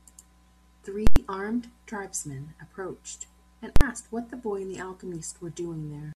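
At 1.07 s, invalid numbers at full scale hit the speech. A calculation produced invalid values pinned at maximum output. A loud pop opens and closes a 93 ms silent gap, fitting a 4096-sample block. At 3.76 s it recurs, 46 ms long.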